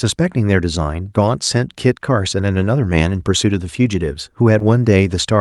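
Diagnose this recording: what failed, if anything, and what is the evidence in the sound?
The fault is a short concealed packet loss, at the network stage, near the end of the speech. Between 4.59 and 4.62 s there is a brief smear or wobble. About 20 ms of audio never arrived in time. The decoder bridged the hole by extending the last sound for about 11 ms, then crossfaded back into real audio. The call codec path carries the speech, with a top end near 12 kHz.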